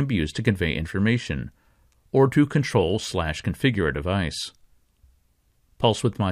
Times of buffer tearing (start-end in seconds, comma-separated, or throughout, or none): none